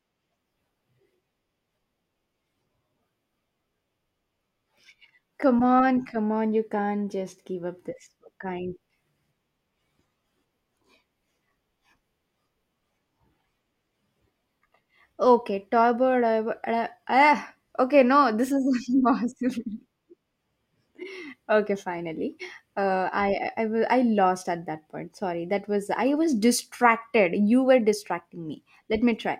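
Listening to the recording, nothing stood out as a technical problem at any point in the speech.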